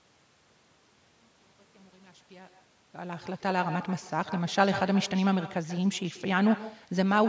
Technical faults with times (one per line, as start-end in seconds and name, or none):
0.00-7.29 echo with no canceller